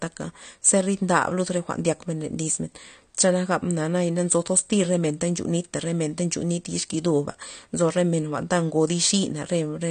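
Throughout the speech, plainly audible smearing and a dull top with nothing above 9 kHz are likely from AAC compression at a low bitrate, with coarse spectral quantisation.

From 0.12 s to the end, clock slip clicks recur about every 20 ms as a rapid rattle, one sample dropped or repeated each time, pointing to a mismatch of roughly 0.1 percent between two free-running clocks.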